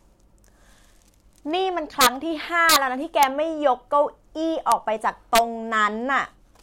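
Speech with integer overflow: harsh cracks at 2.01–2.07 s, 2.69–2.76 s, 3.23 s, 4.72 s and 5.35–5.39 s, where loud peaks overran the integer range by up to about 4 dB and wrapped to the opposite sign instead of being limited. That full-range flip, not a flattened top, makes them far sharper than clipping.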